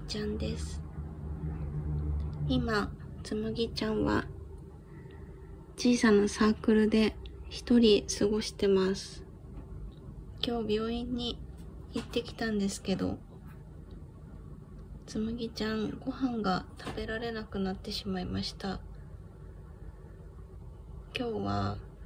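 No technical faults can be heard anywhere in this recording.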